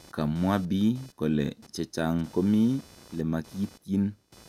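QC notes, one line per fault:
Throughout, computer activity noise: there's a faint buzzy chatter sitting under the speech, pulsing at around 500 Hz and roughly 30 dB below the voice. It tracks whatever the machine was doing rather than the talking, which gives it away. Processor or graphics load swings were pulling on the ground the audio circuit shares, so that switching hash leaked into the recording as a buzz that jumps up and drops back with that activity.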